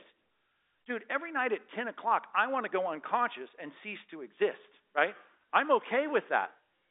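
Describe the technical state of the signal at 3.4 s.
At 3.4 s the speech is intact, with no fault at that moment, just the narrow G.711 telephone band that passes roughly 300 Hz to 3.7 kHz and cuts everything above about 3.8 kHz.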